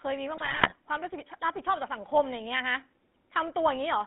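The whole clip runs through the GSM full-rate codec, band-limited to roughly 200 Hz to 3.5 kHz, with clearly audible buzzy, gravelly roughness from its pulse-driven excitation. From 0.36 to 0.73 s, GSM bit errors corrupt the decoder's filter, pitch and gain values, so the speech breaks into squawks, pops and gargling.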